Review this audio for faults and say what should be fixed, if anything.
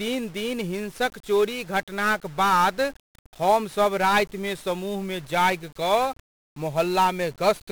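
1-bit DFPWM compression throughout: each sample is coded as a single up-or-down step, which fits a 48 kbps stream, leaving the speech fuzzy, crackly and overlaid with strong broadband hiss. Prevent it by encoding with a multi-bit codec at an adequate bitrate.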